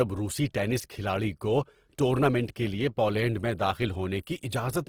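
Opus compression runs throughout the speech, from start to finish. Tones come out rough, grainy and noisy, the likely result of Opus's CELT music mode working at a low bitrate, around 16 kbps. Short of bits, it fills bands with folded or noise-like content instead of leaving gaps. Bandwidth stays full, reaching about 20.3 kHz.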